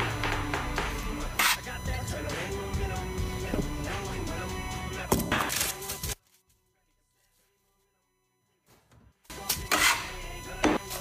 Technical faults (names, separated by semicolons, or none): USB whine; compressed frames skipped; one channel inverted